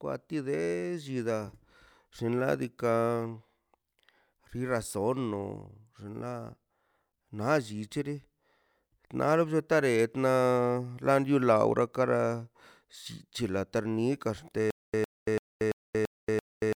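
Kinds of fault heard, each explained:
Stutter with silent gaps: from about 14.71 s to the end, a 105 ms fragment of speech repeats six times, each followed by about 232 ms of digital silence, a 337 ms cycle, likely from a stalled stream replaying its last buffer. Waveform and spectrogram show identical short blocks separated by flat, empty gaps.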